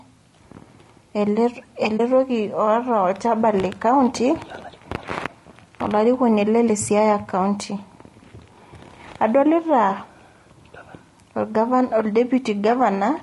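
Throughout the clip, the speech has plainly audible damage from what is likely low-delay AAC compression of the AAC-ELD kind used for video calls, at a rate consistent with about 32 kbps. The encoder's short frames cannot separate closely spaced pitch harmonics cleanly, and at this bitrate too few bits remain to code them well. The speech therefore sounds rough and grainy, with noise filling the gaps between harmonics and a thin, synthetic-sounding top band.

From 1.97 to 2.00 s there is AAC frame loss with muting. The missing data points to a single lost frame of about 20 ms, and the decoder replaced its spectrum with silence. The overlapping transform windows fade the speech out and back in rather than cutting it abruptly. The result is a brief dip in the sound, a momentary dropout.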